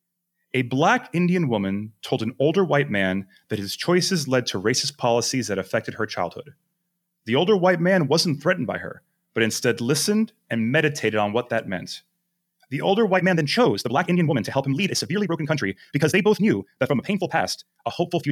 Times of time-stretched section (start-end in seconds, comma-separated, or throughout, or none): 13.12-18.31